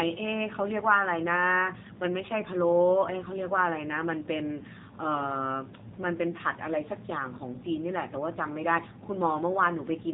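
Throughout the speech, the AMR narrowband mobile codec is audible: nothing passes above about 3.8 kHz, and the heavy buzzy, synthetic quality suggests one of its lower modes, around 6.7 kbps, where a few pulses exciting a vocal-tract model must stand in for the real waveform.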